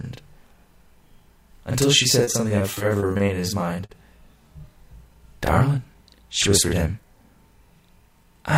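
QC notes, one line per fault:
Throughout: channel delay (doubling). Every sound is followed by an equal-level copy 40 ms later, as one channel lags a long buffer before the mono sum.
2.23 to 3.42 s: repeated packet loss (robotic sound). Choppy sound with pieces missing, as eleven gaps of up to 40 ms are patched by extending the last sound.
3.86 to 3.92 s: short stall from a late packet. A sound hangs for 40 ms with a slight buzz or dip, as the jitter buffer runs dry and holds the last sound until the late packet arrives.
4.76 to 6.02 s: jitter buffer speed-up. Sound runs about 4% fast at the same pitch, as the receiver trims short pitch-period pieces, roughly 70 ms in total, to reduce excess buffered delay.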